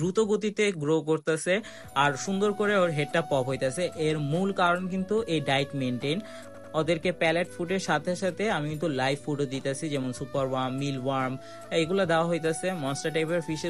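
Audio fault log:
6.54 to 6.74 s, repeated frames: A short stretch of sound plays again, so the audio stutters here. A block of about 96 ms was sent more than once and played two extra times. That fits a run of three compressed frames. The decoder had no way to know the data was a duplicate, so it played each copy in full. The repeats add 192 ms to the clip, and the sound after them arrives that much later.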